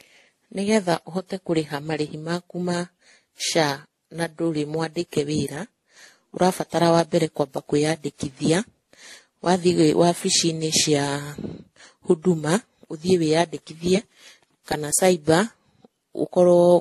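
Transcoding between lossy codecs likely occurred throughout: successive encoders stacked their artefacts, so the speech has nothing above 12.9 kHz and a layered distortion.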